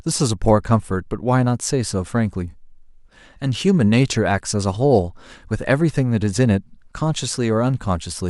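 Speech recording with no audible technical faults.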